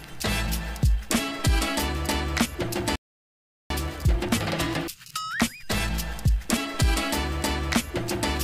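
At 2.96 s the sound cuts to silence until 3.70 s, a gap of about 0.75 s, and then resumes. This is a playback stall, likely the player starving for data or its output thread being blocked.

From 3.70 s to 6.70 s the audio runs about 1.15 times faster than normal while its pitch stays unchanged. This is time-compressed catch-up, where the player trims its backlog by removing and cross-fading short slices. A plain resampled speed-up would instead also raise the pitch.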